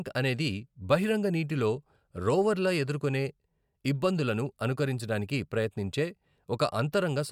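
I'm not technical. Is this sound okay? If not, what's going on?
Yes, nothing stood out as a problem on listening to this recording.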